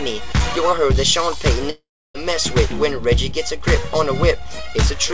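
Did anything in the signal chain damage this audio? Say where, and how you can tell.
Yes, at the network stage: from 1.70 to 2.17 s the sound smears into a fading buzz, then goes flat for about 0.3 s. That is likely a long network dropout, with the receiver concealing roughly 0.45 s of lost audio before resuming further on. On a waveform it shows as a decaying tail and then a near-flat gap. On a spectrogram it looks like a smeared, fading band followed by an empty stretch, within a spectrum that stops at 8 kHz, as expected for a G.722 call path.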